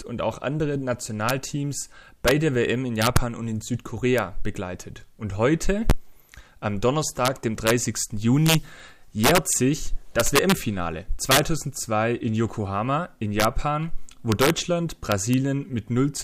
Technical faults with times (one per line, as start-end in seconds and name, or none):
0.00-16.23 integer overflow